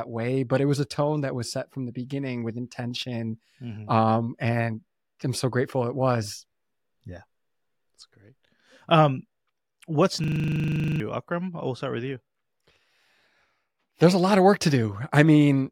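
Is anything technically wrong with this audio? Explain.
Yes. From 10.24 to 11.0 s there is a system hang loop: the system froze while the sound hardware kept replaying one 40 ms buffer, giving a steady 25 Hz buzz that replaces about 0.7 s of speech.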